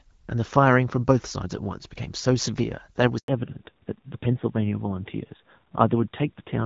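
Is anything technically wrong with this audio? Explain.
Yes. There are two faults, and the second follows directly on the first.

At 3.18 s the sound cuts out for 100 ms, until 3.28 s. This is a handover gap: the call switched networks, and no frames arrived while the new link came up. The sound fades out within a few tens of milliseconds and leaves clean silence, so whatever was said in that window is gone. Ordinary packet loss is different. It tends to leave stuttering, smeared or repeated fragments, and here there is only a single clean hole.

From 3.28 s to the end, a fallback to narrowband follows. Before the gap, the audio has the fuller, clear quality of HD Voice, consistent with AMR-WB at a mid rate of around 12.65 kbit/s. After it, everything above 4 kHz is missing, and the sound turns duller and rougher, which points to a narrowband codec such as AMR-NB around 7.4 kbit/s. A plain low-pass filter would only muffle the sound. 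This adds coarse codec grain, and its onset right after the gap ties it to the handover.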